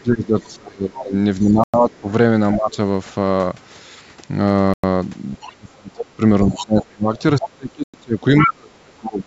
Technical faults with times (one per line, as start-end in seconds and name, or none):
0.00-2.78 speech suppressed in double talk
0.40-1.99 other side's voice leaking through
1.64-1.74 gap between chunks
4.74-4.84 gap between chunks
5.38-9.26 speech suppressed in double talk
5.41-5.55 other side's voice leaking through
6.47-7.49 other side's voice leaking through
7.84-7.94 gap between chunks
8.40-8.49 other side's voice leaking through